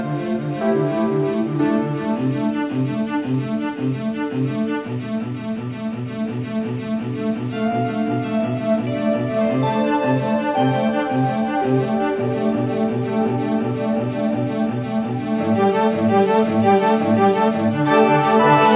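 No technical faults are audible.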